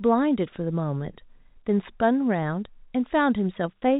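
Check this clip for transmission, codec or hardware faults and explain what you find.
No transmission, codec or hardware faults can be heard in this speech clip. It has the narrow sound of G.711 telephone coding, with nothing above 4 kHz and only a faint quantisation hiss riding under the speech, which fits A-law at 64 kbps.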